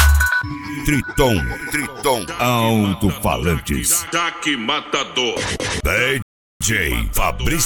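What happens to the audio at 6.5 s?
The player ran out of buffered audio, causing a rebuffering stall from 6.22 to 6.61 s: sound drops to silence, then resumes exactly where it stopped, adding 0.38 s.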